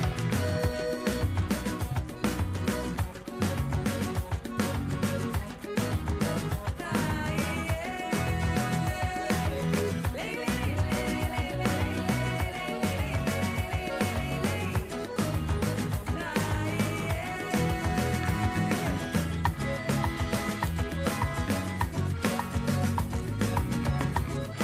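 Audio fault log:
No faults found in this audio.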